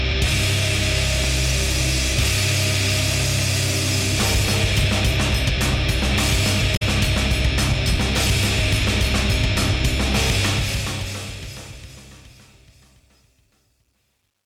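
From 1.24 to 3.74 s there are periodic USB or driver dropouts. Every 0.5 s, a sliver of audio of roughly 2 ms is replaced by silence. That points to a background task stalling the bus or driver. About seven evenly spaced ticks result, each cutting into the signal.

At 6.75 to 6.82 s comes damaged data in a compressed stream. Corrupt bytes made the decoder misread frames and lose sync while hunting for the next header. The result is a brief disruption lasting about 70 ms.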